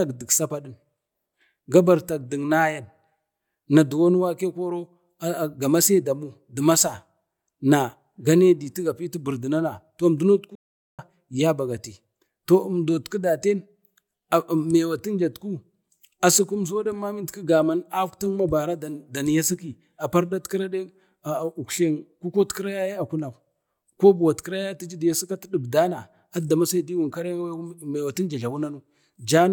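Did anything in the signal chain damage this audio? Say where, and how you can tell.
Yes. At 10.55 s the speech cuts to silence mid-flow and resumes at 10.99 s, a gap of about 0.43 s. This playback stall points to the playback stage, likely the player running out of buffered data or its output thread being blocked until it recovered.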